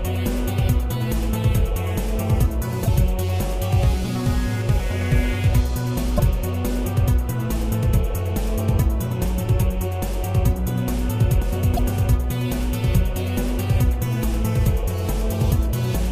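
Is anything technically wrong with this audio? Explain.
Yes. Damaged data in a compressed stream causes brief glitches at 2.84–2.88, 6.15–6.20, 9.21–9.25 and 11.75–11.79 s. Corrupted bytes there make the decoder misread frames and lose sync.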